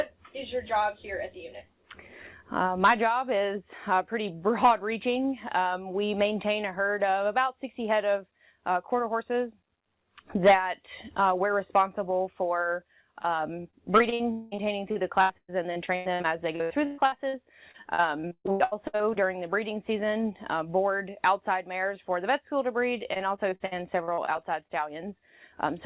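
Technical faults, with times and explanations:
13.22–17.35 s, 17.71–19.17 s and 23.13–24.72 s: repeated packet loss (robotic sound). The audio breaks up into rapid choppy holes, each patched by stretching the preceding sound, which gives the robotic texture. The longest holes are about 117 ms in the first run, 116 ms in the second and 57 ms in the third. Roughly 1 s, 0.56 s and 0.32 s of real audio are replaced, about 24%, 38% and 20% of each run.
14.32–14.54 s: long network dropout. Inside the first choppy run, a single continuous stretch of about 200 ms is carried entirely by concealment. The last sound is extended as a smeared buzz or hiss that never reaches silence, and the audio resumes with that portion simply gone. This is likely a short burst where no packets arrived at all, rather than scattered single losses. Throughout, the G.711 A-law call path leaves nothing above 4 kHz, so the patched segments sound narrowband.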